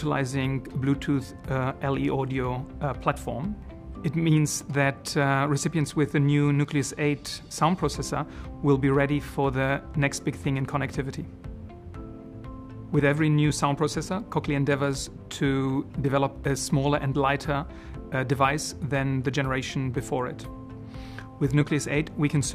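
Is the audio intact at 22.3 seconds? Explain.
Yes, the audio is intact at 22.3 seconds, with no dropout, click, distortion or other fault at that moment.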